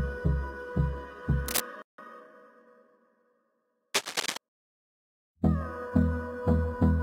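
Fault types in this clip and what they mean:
Cable scratch noise: dense, uneven scratching bursts at 1.46–1.61 s, near signal level, and 3.94–4.37 s, about 5 dB lower; likely a worn connector being moved.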